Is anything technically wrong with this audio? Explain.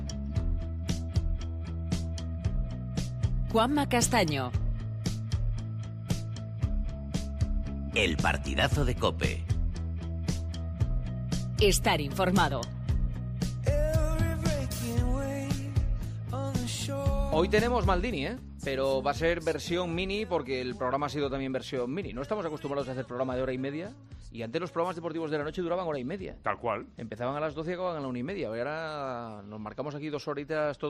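No, nothing technically wrong can be heard here.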